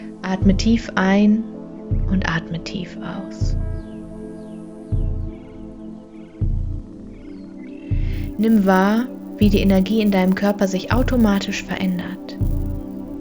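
From 8.13 s to the end, a resampler restarted on every block (24 kHz to 48 kHz, 10 ms blocks) leaves edge errors, heard as a 100 Hz buzz and seen as vertical lines every 10 ms.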